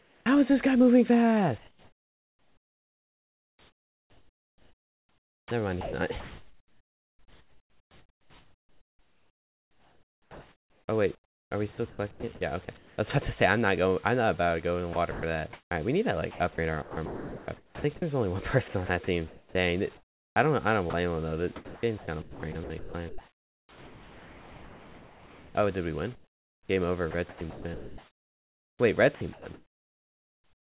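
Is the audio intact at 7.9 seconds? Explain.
No. Between 1.58 and 12.98 s the sound is choppy, likely chopped by the voice detector swapping stretches for comfort noise. The waveform alternates real bursts with flat, even noise.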